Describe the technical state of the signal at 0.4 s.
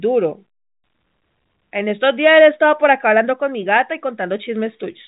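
At 0.4 s the speech is intact, with only the narrow band of ordinary G.711 telephone coding, which passes nothing above about 3.8 kHz.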